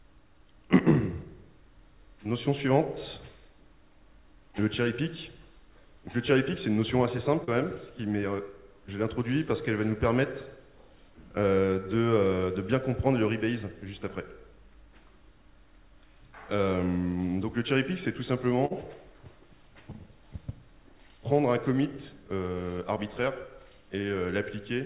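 At 7.44 s there is a short concealed packet loss lasting about 54 ms. Audio failed to reach the decoder in time, so the receiver extended the preceding sound for roughly 34 ms before blending back. It is heard as a brief smear, and about 40 ms of the original is gone.

At 18.65 s a burst of packet loss runs to 18.72 s. The receiver held the last sound for about 50 ms while fading it down, producing a short sustained buzz or decaying hiss. Playback then resumes with about 40 ms missing. Throughout, nothing is present above 4 kHz, which points to a narrowband call codec.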